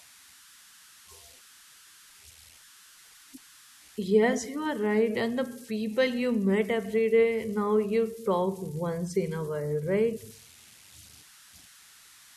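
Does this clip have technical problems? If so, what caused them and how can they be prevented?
Yes. Converter idle tones run through the whole speech clip: a whistle around 1.5 kHz sits in the pauses, and graininess lies under the speech, at about -26 dB relative to the signal. The delta-sigma converter is running without dither, so when its input is very small the modulator settles into repeating bit patterns, and these produce tones whose pitch follows the input's DC offset. Prevent this by enabling dither in the converter and removing any residual offset at its input.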